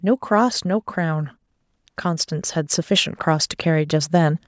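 From 0.63 s to 2.6 s, an automatic gain rising fault occurs: the call's gain control judged the incoming level too low and kept turning its gain up, by about 4 dB over those two seconds. Because the boost applies to everything picked up, the speech and the room noise behind it swell together, a slow upward drift in loudness rather than a jump, heard within the call microphone processing's band, which stops at 8 kHz.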